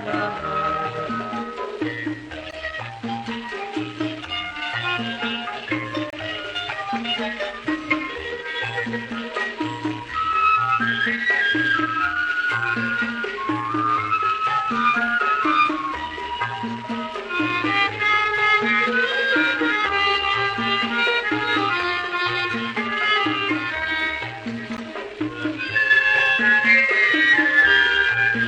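Corrupt frames were decoded: damaged compressed frames, two or three at a time, were played despite flipped bits, misplacing energy across frequencies. Short chirpy bursts, peaking around -20 dBFS, result at 2.46–2.54 s, 6.10–6.15 s and 24.77–24.80 s.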